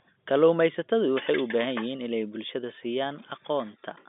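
Nothing here goes wrong: the speech comes over as an ordinary G.711 telephone line would carry it, held to roughly the 200 Hz to 3.6 kHz band with nothing above about 3.8 kHz, and no glitch turns up anywhere along the way.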